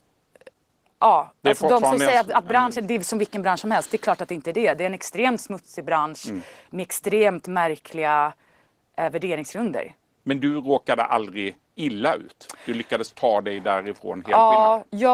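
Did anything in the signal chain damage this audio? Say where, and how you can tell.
Yes. Opus voice compression damaged this speech throughout, from start to finish, at the codec stage. The voice has a plainly audible hoarse, grainy, slightly robotic texture, which points to Opus in hybrid mode at around 16 kbps with 20 ms frames. The linear-prediction layer codes the lower band's excitation coarsely at that rate, roughening the voicing. A thin transform layer carries the content above 8 kHz, so the band stays full.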